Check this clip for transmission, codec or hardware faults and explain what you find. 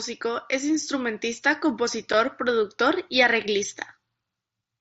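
One transmission fault is present, a single brief dropout in speech carried over an mSBC wideband headset link. At 2.13 s, between "es instrumentista" and "productor y", unconcealed Bluetooth headset packet loss cuts out about 7.5 ms, consistent with one lost mSBC frame replaced by silence. It sounds like a tiny abrupt hole in the speech, shows as a sharp-edged flat gap in the waveform, and appears as a thin vertical blank stripe on the spectrogram.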